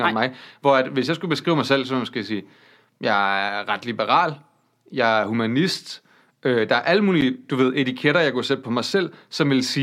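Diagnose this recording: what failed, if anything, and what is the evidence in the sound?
The failure is at the driver or buffer stage: a block of digital silence at 7.21 s in the speech. The audio drops to silence for about 10.7 ms and returns with no fade, so a tick is heard rather than a hole. The output buffer was likely not refilled in time, and the gap length fits a 512-sample buffer. The waveform shows a flat line near zero with abrupt edges. On a spectrogram, a thin vertical broadband stripe marks each edge around a blank slot.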